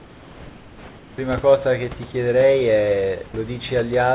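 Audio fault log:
0.00–1.18 s, comfort noise in place of the background: For the first 1.18 s the room tone, which sits about 25 dB below the loudest speech, is replaced by a smooth, even hiss about 2 dB quieter and without the small shifts of a real room. The likely cause is discontinuous transmission: the sender went quiet during the pause and the receiver made up noise shaped like the background. Unlike a noise gate, this fills the pause with noise instead of silence.
3.28–3.34 s, sound dropped by the voice detector: A 60 ms stretch turns into the same flat synthetic noise, and about 30 ms of actual speech is lost inside it. The likely cause is the sender's voice detector mistaking a quiet stretch of speech for background and pausing transmission. Unlike packet-loss concealment, nothing is repeated or stretched to fill the gap. The sound simply gives way to featureless noise, set against speech that is band-limited to 4 kHz on the call path.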